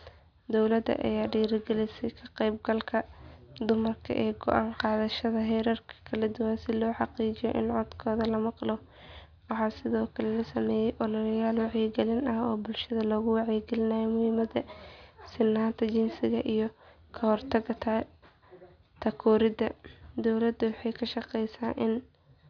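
No technical faults occur anywhere in the speech, so there is nothing to describe in time order.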